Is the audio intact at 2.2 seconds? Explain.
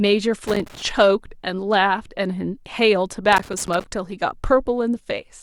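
Yes, at 2.2 seconds the speech plays through cleanly, with no dropout, click, distortion or other fault at that moment.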